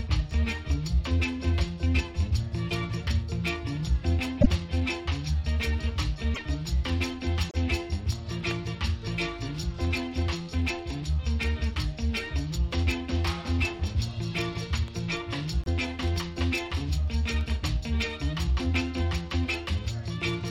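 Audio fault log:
4.40–4.47 s, 6.34–6.39 s, 7.49–7.55 s and 15.64–15.68 s, broken MP3 bit reservoir: short glitches of 40 to 70 ms where the audio lurches forward. Frames were likely dropped, so the ones after each gap borrow reservoir bits from the wrong data. The lengths fit roughly 1.6 to 2.6 26 ms MP3 frames.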